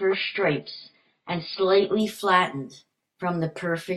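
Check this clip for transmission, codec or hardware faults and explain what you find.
One fault: an adaptive stream starting at a low bitrate. From 0.0 to 2.0 s the speech has nothing above about 5.1 kHz and heavier codec artefacts, which points to a very low-bitrate AAC rendition while the player measured the connection. At 2.0 s it steps up to a fuller version, likely around 96 kbit/s, and the treble returns abruptly. Unlike a dropout or packet loss, there is no gap at the switch.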